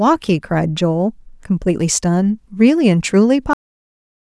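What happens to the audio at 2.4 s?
At 2.4 s the speech carries on without any audible fault; the audio is intact at that moment.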